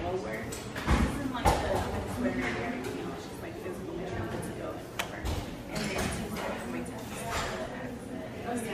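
No technical faults are audible.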